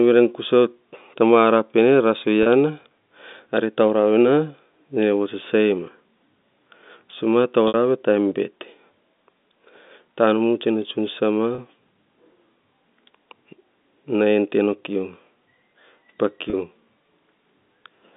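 At 2.43 s, 11.55 s and 16.5 s, packet loss with pitch repetition bridges a 30 ms gap each time, and at 7.68 s a longer 60 ms gap, which fits two lost packets. The receiver fills each hole by repeating the last pitch cycle, so instead of a click the speech briefly holds a buzzy, steady tone before resuming; in the longer 60 ms gap that tone fades into silence and the speech returns with a short cross-fade. The narrowband telephone sound of the G.711 line stays the same throughout.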